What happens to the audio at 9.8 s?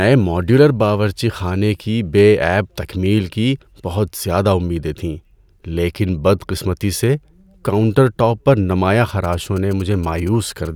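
GSM signalling bursts run from 9.09 to 10.67 s, just after "کاؤنٹر ٹاپ پر نمایاں". A nearby 2G phone is signalling, and the audio circuit rectifies its radio bursts. The result is a galloping dit-dit-dit of short 217 Hz buzzes, roughly 25 dB below the speech.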